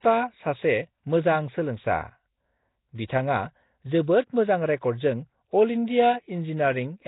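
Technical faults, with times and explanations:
Throughout, Nellymoser compression: speech sounds rough, hissy and smeared underwater with nothing above 3.8 kHz, likely heavy Flash-era coding that fills starved bands with noise.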